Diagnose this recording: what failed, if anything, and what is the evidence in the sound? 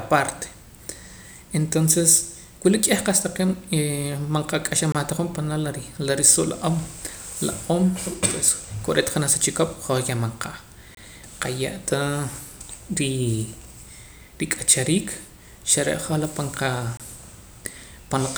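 The failure is a gap between chunks, at the storage or playback stage. The speech breaks into hard-edged silent holes at 4.92 to 4.95 s, 10.95 to 10.97 s and 16.97 to 17.00 s. Each hole lasts about 25 ms. They recur every 6.0 s, which points to audio handled in 6-second chunks. Silence is inserted at each join, likely from codec padding or a player starting each chunk late. No sound is lost, but the flow is cut at every boundary.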